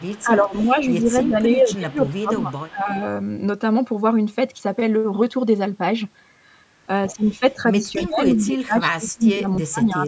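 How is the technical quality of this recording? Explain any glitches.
The recording has two call-path faults: echo leaking back from the far side, and the talker being turned down while both sides speak.

Echo leak, at 0.0–0.23 s, 0.47–0.64 s, 2.05–2.18 s and 2.36–2.69 s: a far-end echo canceller likely failed to fully remove its loudspeaker pickup. A faint copy of the speech returns about 0.31 s late, roughly 25 to 30 dB below the direct sound.

Speech suppressed in double talk, at 0.11–0.77 s, 1.25–3.02 s and from 7.4 s to the end: the echo canceller likely mistook overlapping talk for echo and attenuated everything. The speech dips by around 10 dB early, about 20 dB in the middle stretch and as much as 30 dB at the end.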